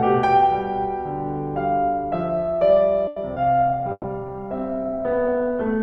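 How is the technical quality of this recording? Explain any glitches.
The recording has a cluster of network-related glitches in its second half, starting just after 3 s, and the tonal quality degrades for the rest of the music clip.

At 3.07 to 3.19 s there is a short stall from a late packet. A packet arrived late, the jitter buffer ran dry, and the receiver stretched the last sound by about 90 ms until it came in. Nothing is lost, but the music hangs briefly with a faint buzz.

At 3.34 to 3.39 s comes a short concealed packet loss. About 60 ms of audio never reached the decoder, and only around 20 ms was synthesised from the preceding sound. The result is a quick smear or wobble with a small jump forward, as the buffer shed roughly 40 ms of delay.

From 3.61 s to the end there is a call bitrate drop. The sound becomes coarse and muffled as high frequencies are cut, which fits the encoder falling from around 128 kbps to about 15 kbps after the bandwidth estimate collapsed. 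It stays at its worst for about 1.1 s.

From 3.71 to 4.29 s a jitter buffer slow-down overlaps this. The receiver repeated short segments of the waveform to rebuild its reserve, adding 42 ms, so the music runs at 94% speed without a pitch change.

Within that span, 3.92 to 4.07 s holds a burst of packet loss. About 120 ms was lost. The receiver extended the last sound for 120 ms while fading it, and about 30 ms went silent. The music then resumes further on, with that section missing.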